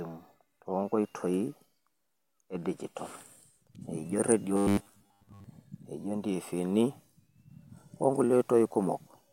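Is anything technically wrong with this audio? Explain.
Yes. From 4.57 to 5.44 s the speech shows robotic sound from repeated short buffers: audio likely arrived too seldom, so roughly 10 ms chunks were replayed over most of that stretch, imposing a rigid, metallic 100 Hz buzz.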